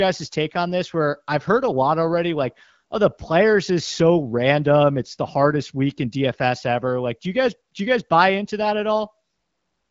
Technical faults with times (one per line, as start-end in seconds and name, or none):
none